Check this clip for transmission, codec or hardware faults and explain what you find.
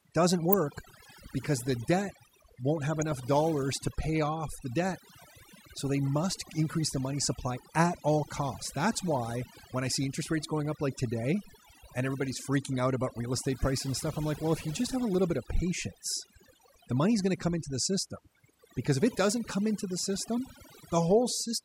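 Two faults are present: heavy-handed noise reduction across the whole recording, and two short bursts of digital radio reception errors.

Overdone noise removal, throughout the 22-second speech clip: the noise reducer mutes every frequency band that sits near its noise estimate, taking quieter speech detail with it. The background drops and breaks up into twinkling specks.

DAB burbling, at 0.53 s and from 3.01 to 3.14 s: weak reception lets bit errors, around 0.2 percent, slip past error correction into the MP2 data, corrupting samples across several frames. Single sub-bands pick up short blips of noise over the speech.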